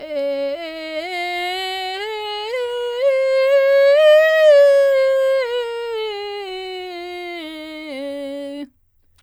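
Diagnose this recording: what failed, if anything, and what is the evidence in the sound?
Nothing failed; the music carries no audible faults.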